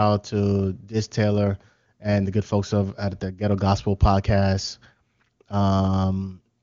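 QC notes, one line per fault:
No faults to note: the speech comes through the AMR wideband (HD Voice) codec with nothing above about 7.2 kHz, as that path carries it.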